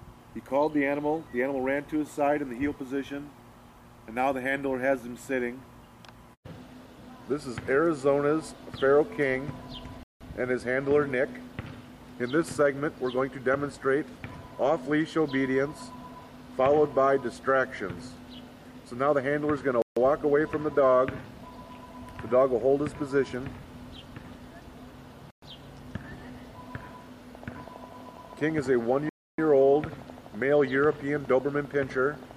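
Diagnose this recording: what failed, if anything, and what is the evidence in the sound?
Bluetooth stalls at 10.03 s, 19.82 s, 25.31 s and 29.09 s: the sound drops to silence for 174 ms, 145 ms, 117 ms and 291 ms, then resumes. This points to the network stage, the wireless link to the playback device. The likely cause is radio interference delaying packets, so the headphones' small receive buffer emptied and output halted until the retransmitted audio came through.

Train of clicks from 27.35 s to 32.32 s: a regular ticking at about 12.2 clicks per second, around fifty clicks of near-identical shape, peaking at roughly the level of the sound itself and audible in the gaps too. The likely source is electrical interference coupling into the analogue wiring or a struggling interface, injecting a repeating pulse at a steady rate. The clicks overlap the 29.09 s stall.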